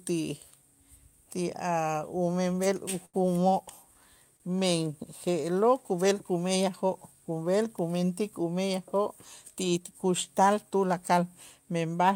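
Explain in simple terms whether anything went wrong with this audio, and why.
Two short stalls from a late packet occur, at 3.05 to 3.16 s and 4.37 to 4.42 s. Each time, a piece of the speech arrived late, so the player held the last sound for about 80 ms and 30 ms, then resumed without losing anything.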